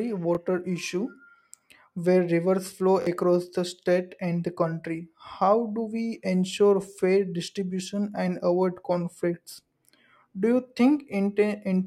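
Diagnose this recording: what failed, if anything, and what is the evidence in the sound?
Repeated buffer at 0.35–0.37 s and 3.02–3.07 s: the driver or buffer stage ran dry, so the same 23 ms slice of speech replays with a hard seam, once then twice, heard as a brief stutter. The slice length fits a 1024-sample buffer, and the repeats cost roughly 20 ms and 50 ms of audio.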